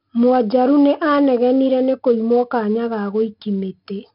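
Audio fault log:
throughout: 4-bit ADPCM compression. Heavy gritty hiss rides on the louder speech and scales with it, attacks sound roughened, and nothing remains above 5.3 kHz. Each sample is a coarse 4-bit predicted step; the dull top fits a 44 kbps stream.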